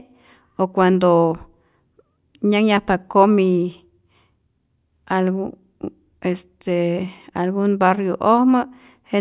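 No technical faults can be heard anywhere in this speech recording; the signal stays continuous and steady throughout.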